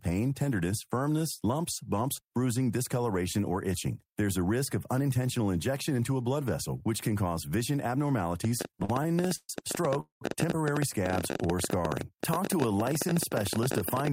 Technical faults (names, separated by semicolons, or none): train of clicks; repeated stalls (stutter); short stall from a late packet; call audio freeze; jitter buffer slow-down